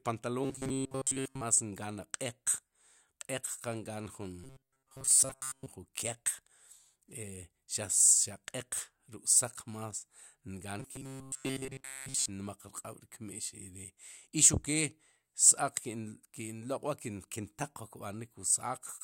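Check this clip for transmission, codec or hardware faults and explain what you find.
Robotic sound from repeated short buffers occurs three times, at 0.44–1.41 s, 4.44–5.66 s and 10.80–12.29 s. The speech turns into a rigid metallic buzz at 134 Hz that still roughly tracks the words. The likely cause is audio arriving too seldom, so the playback fills the gaps by looping a fragment of about 7.5 ms and skipping the real signal. Most of the audio is replaced in the first and third spans, and nearly all of it in the second.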